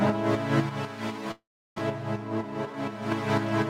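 At 0.69 s the level drops abruptly by about 6 dB and stays down until 3.12 s. This likely comes from one channel dropping out before the mono sum.

From 1.31 to 1.80 s the sound smears into a fading buzz, then near-silence. About 400 ms never returns. This is likely a long network dropout.

From 2.36 to 2.74 s the sound runs about 9% fast at unchanged pitch. That is a jitter buffer speed-up, trimming roughly 40 ms of pitch periods.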